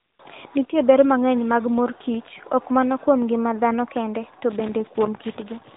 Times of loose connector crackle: 2.08-2.28, 4.51-5.76

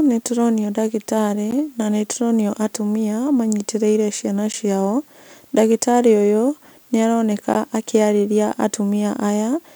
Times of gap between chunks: 1.51, 4.52, 7.54

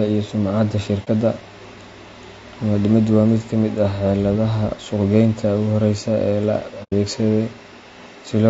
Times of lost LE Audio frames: none

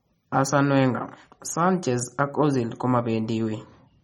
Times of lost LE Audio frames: none

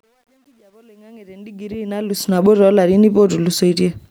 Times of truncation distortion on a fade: 0.00-2.47

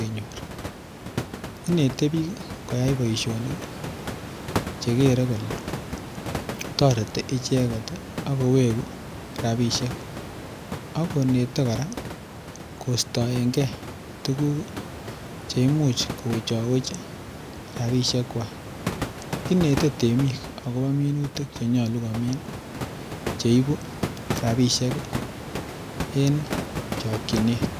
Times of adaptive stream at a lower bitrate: none

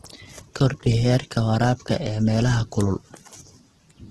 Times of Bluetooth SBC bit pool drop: none

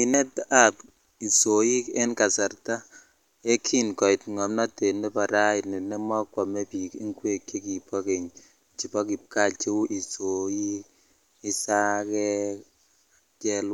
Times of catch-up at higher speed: none

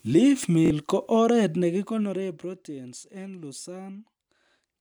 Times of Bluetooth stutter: 0.66-0.70

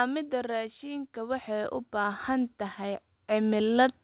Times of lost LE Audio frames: none

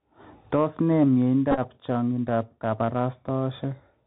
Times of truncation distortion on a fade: none

